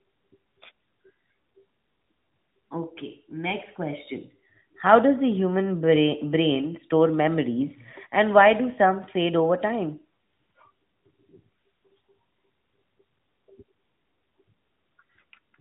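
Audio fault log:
Nothing stood out on listening to this speech recording.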